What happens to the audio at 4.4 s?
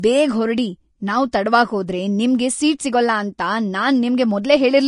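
At 4.4 s, as throughout the clip, the speech sounds hissy and grainy with nothing above about 10.6 kHz, likely Vorbis compression at a low bitrate, consistent with roughly 34 kbps, coarsely quantising the treble into noise.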